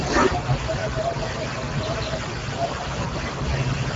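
Throughout, the speech sounds hoarse and noisy with nothing above 7.7 kHz, which points to the Speex codec at about 10 kbps, starved of excitation bits.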